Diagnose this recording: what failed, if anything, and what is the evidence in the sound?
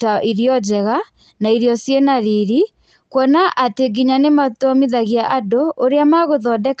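Nothing stood out on listening to this speech recording that would point to a failure at any stage of the chain.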